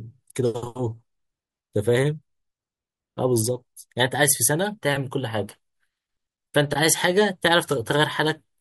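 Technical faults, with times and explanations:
No technical faults can be heard in the speech. There is nothing to list with a time or an explanation.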